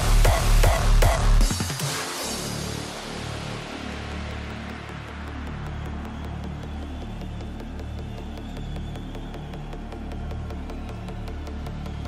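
A video or display buzz comes in at 3.21 s and stays to the end of the audio, sitting roughly 35 dB under the main sound. A screen or video cable is coupling its picture refresh into the audio path, so the buzz repeats at the 75 Hz field rate with a gritty hash above it. That 75 Hz fundamental is what separates it from mains hum, which would sit at 50 or 60 Hz and sound smoother.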